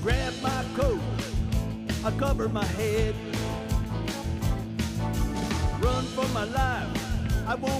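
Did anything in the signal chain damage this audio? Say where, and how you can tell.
No, nothing in the signal chain has left audible damage on this audio at any stage.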